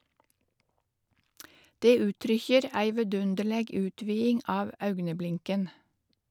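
Nothing stood out on listening to the speech in this recording.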